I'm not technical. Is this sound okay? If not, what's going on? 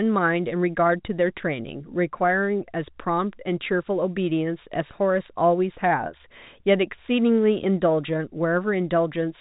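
Yes, nothing stood out as a problem when listening to this speech recording.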